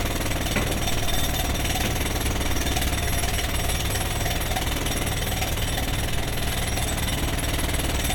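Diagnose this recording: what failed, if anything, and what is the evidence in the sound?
Nothing in this recording of everyday sounds points to a failure at any stage of the chain. There is no evidence to report from the wiring through to playback.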